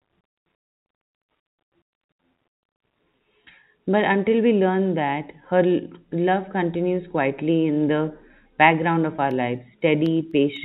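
Right around 9.16 to 9.18 s there's a bit of packet loss with pitch repetition. About 20 ms went missing, which fits a single lost packet, and the receiver covered it by looping the last pitch period, so you hear a brief, slightly held, buzzy smear before the speech carries on.

Then from 9.31 s to 10.56 s come periodic USB or driver dropouts: something is stalling the audio path every 0.25 s, and each time a tiny sliver, well under a millisecond, gets replaced with silence. That's about seven evenly spaced little ticks, riding on top of the telephone-band G.711 sound, with nothing above 4 kHz.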